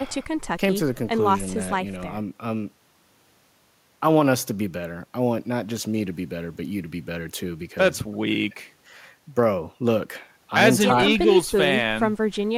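A speech clip with no technical faults.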